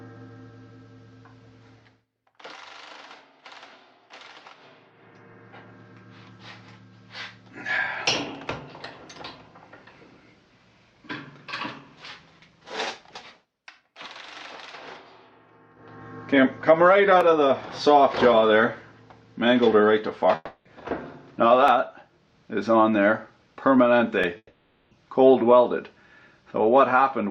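The first problem hits at 17.21 s: a single sharp click, most likely dropped samples. A tiny slice of the stream, well under a millisecond, went missing, so the waveform jumps straight to a later value. Nothing you'd notice as lost sound, just that tick. The same kind of click comes back at 21.68 s and again at 24.24 s, each one likely the same sort of sub-millisecond skip.

At 20.35 s there's what sounds like a long network dropout, running to 20.68 s. About 300 ms of real audio likely never arrived. The receiver papers over it by stretching the last sound into a fading buzzy tail, and you get a brief near-silence of roughly 10 ms before things pick up again, minus the missing chunk. A bigger one hits at 24.37 s and lasts until 24.94 s. That's about 540 ms of likely lost audio, the same fading fill, then around 40 ms of quiet before it resumes.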